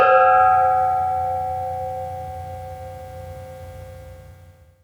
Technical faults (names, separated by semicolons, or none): none